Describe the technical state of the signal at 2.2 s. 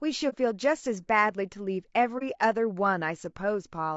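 An AAC frame was lost and the decoder muted its spectrum, consistent with a single missing frame. Overlapping windows fade the speech out and back in from 2.18 to 2.23 s, leaving a brief dip. The speech also carries plainly audible coding damage, likely from low-delay AAC compression such as AAC-ELD at around 32 kbps. It sounds rough and grainy across the whole passage.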